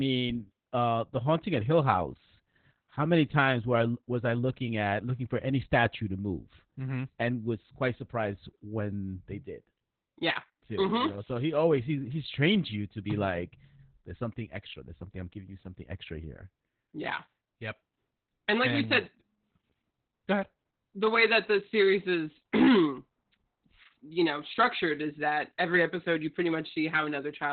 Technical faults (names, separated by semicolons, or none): Opus voice compression